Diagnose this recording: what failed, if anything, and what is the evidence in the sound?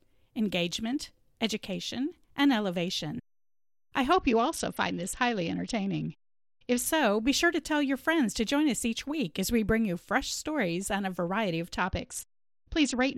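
Codec stage: a Bluetooth SBC bit pool drop from 4.13 to 6.86 s, before "be sure to tell", and from 11.77 s to the end, after "on a variety of". Treble dulls and gritty noise rises without gaps, unlike packet loss, which fits the bit pool falling from 28 to 8, near 72 kbps.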